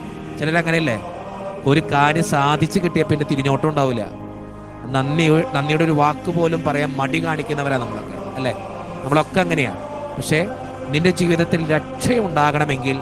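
The audio runs without any audible technical fault: level, continuity and timing hold steady throughout.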